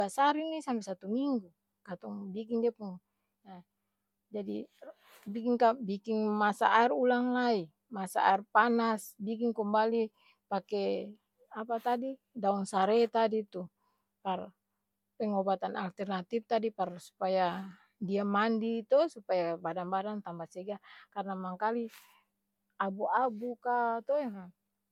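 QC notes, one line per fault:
Throughout: generation loss, a swirly, hollow, smeared sound with softened consonant attacks, likely from about three MP3 passes at a rate near 128 kbit/s, each requantising on a shifted frame grid. A spectrogram shows patchy holes and a blurred, ragged top band.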